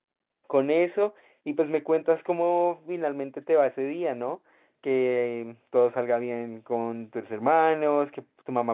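Nothing stood out on listening to the speech, which carries the expected narrow band of mu-law G.711 telephone coding at 8 kHz.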